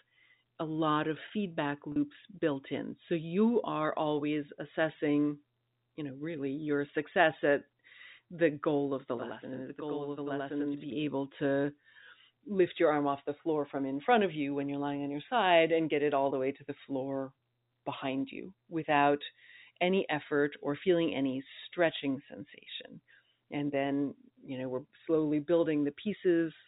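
At 1.92 s, about 40 ms of the speech drops out, which fits two lost packets. This is packet loss with pitch repetition. The receiver fills the gap by repeating the last pitch period. It is too short to fade out, so it sounds like a brief, slightly held buzzy note.

From 9.18 s to 10.92 s, the sound doubles. This is channel delay (doubling). One channel runs about 93 ms late, which fits a 4096-sample buffer. The two channels are summed to mono, so the late copy is heard at the same level as a distinct slap echo. The G.711 telephone band stops at 4 kHz throughout.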